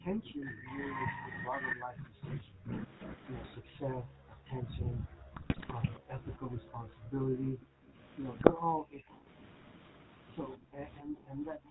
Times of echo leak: 5.94-5.98, 9.08-9.18

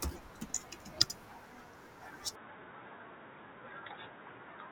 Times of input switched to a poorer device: 2.35-4.72

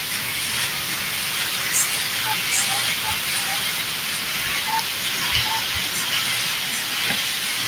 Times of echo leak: 0.50-7.68

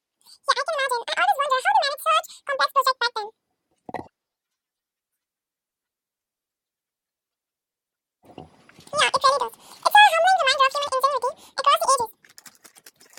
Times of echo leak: none

